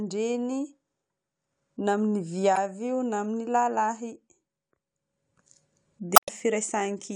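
At 2.53 to 2.57 s, and again at 6.13 to 6.29 s, the speech breaks up briefly. This is damaged data in a compressed stream. Corrupted frames get misread, the decoder loses sync, and it hunts for the next valid frame header.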